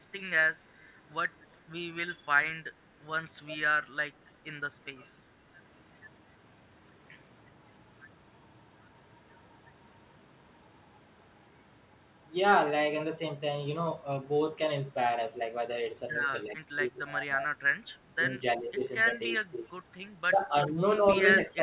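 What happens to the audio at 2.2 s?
The speech dips sharply, by roughly 15 dB at its deepest, for about a fifth of a second from 2.09 to 2.3 s. This sounds like speech suppressed in double talk: with both sides talking at once, the echo canceller likely mistook the talker for loudspeaker echo and turned the signal down.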